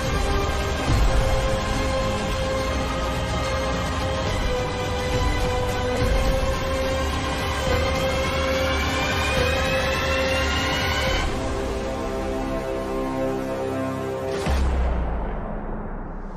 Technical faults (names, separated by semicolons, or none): none